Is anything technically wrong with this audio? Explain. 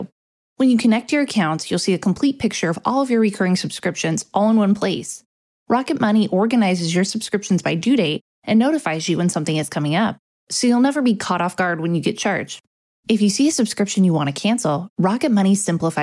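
No, nothing technically wrong turns up here; it all sounds just as it should.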